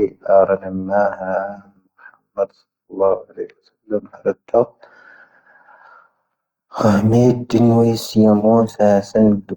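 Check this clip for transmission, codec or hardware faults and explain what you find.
One fault runs through the whole clip: Opus compression. The speech sounds grainy and rough throughout, with a noisy edge on voiced sounds. This is likely an Opus encoder in its music mode, filling starved bands with folded or noise energy. That fits roughly 24 kbps. The bandwidth stays full, reaching about 20.5 kHz.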